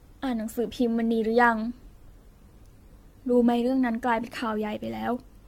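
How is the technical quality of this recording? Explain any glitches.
The recording is degraded throughout by generation loss. From start to finish the speech sounds swirly, smeared and hollow. Consonant attacks blur. Nothing is audible above 17 kHz. The damage is heavier than a single AAC-LC pass at 96 kbit/s would leave. The likely cause is repeated lossy coding, around ten times over. Each decode and re-encode quantises the signal again on a shifted frame grid, so noise and spectral holes pile up.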